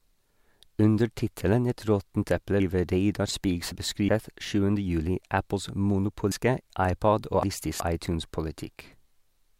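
Jumbled passages at 2.60–4.09 s, just after "råttent eple", and again at 6.32–7.80 s are chunks out of order. In each, a 0.37 s chunk of speech arrived late and plays three chunks after its proper place, leaving three hard joins.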